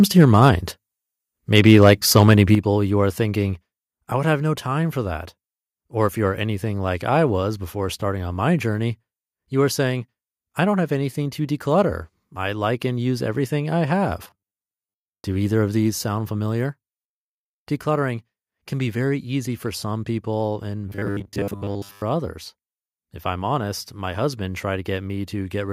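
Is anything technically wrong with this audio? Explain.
Yes, the speech has three kinds of fault.

Microphone overload at 0.19 to 0.5 s and 1.57 to 2.34 s: peaks run about 2 to 3 dB past the converter's limit, likely from excessive input gain, flattening their tops into a harsh crackle.

Microphone volume stepped down at 2.55 s (about 7 dB, just before "you are thinking I"), 3.57 s and 15.9 s (about 2 dB each): the input level likely dropped abruptly, lowering voice and background together.

Robotic sound from repeated short buffers at 14.24 to 15.24 s, after "and use everything I", and 20.89 to 22.02 s, after "for some people and": late-arriving audio was likely covered by looping roughly 10 ms fragments over most of each stretch, imposing a rigid, metallic 100 Hz buzz.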